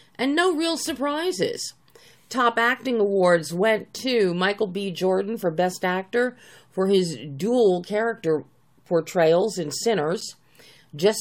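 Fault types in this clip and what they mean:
Gap between stream segments at 10.21 s: the timestamps of two adjoining 2.0 s stream segments leave an 8 ms hole, which the player fills with silence, so a brief hard-edged dropout cuts into the sound while nothing from either segment is lost.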